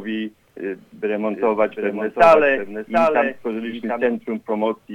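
A second copy of the audio is most likely being captured by a slower path, or held out of step by an edit, and mixed back in. This doubled audio track runs from 1.30 s to 4.06 s: a full-band repeat trailing the original by roughly 0.7 s, about 5 dB quieter. It carries no decay or room colour, so it sounds like a distinct, clean second layer rather than an echo, and it cuts in and out abruptly at both ends.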